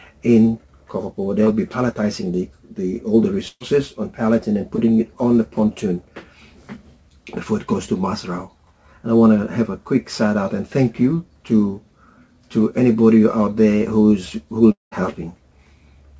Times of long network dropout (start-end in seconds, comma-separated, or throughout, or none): 14.72-14.93